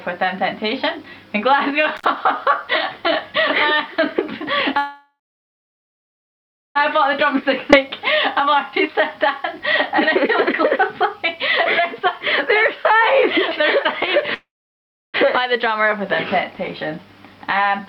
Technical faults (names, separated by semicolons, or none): intermittent contact; call audio freeze; jitter buffer speed-up; skip ahead